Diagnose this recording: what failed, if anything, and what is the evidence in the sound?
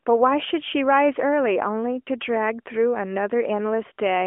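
Nothing in this speech recording has failed at any stage. The mobile path is working as an AMR narrowband codec should, with the sound confined to a telephone band of about 250 Hz to 3.4 kHz, nothing above 3.5 kHz, and only the light synthetic colouring that fits its highest 12.2 kbps mode.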